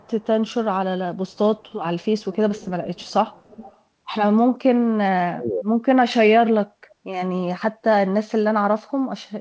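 Right from the start, 0.00 to 0.53 s, there's a faint delayed copy of the speech trailing it by about 306 ms. That's an echo leak, most likely from a far end on loudspeaker whose echo canceller let some of its mic pickup get sent back. It returns, quieter still, at 1.31 to 1.73 s with the same 306 ms lag. From 2.18 to 3.79 s it's much more obvious, roughly 20 dB under the speech and lagging by 334 ms, so you hear a ghostly double of the talker.

Then at 5.28 to 5.66 s the speech suddenly drops away by something like 35 dB for around 0.4 s. That's speech suppressed in double talk: with both sides likely talking at once, the canceller probably couldn't tell the local talker from the loudspeaker echo and clamped down on everything.

The echo leak pops up once more, very briefly, at 8.87 to 8.92 s, at a 298 ms delay. All of it sits within the G.722 call band, with nothing above 8 kHz.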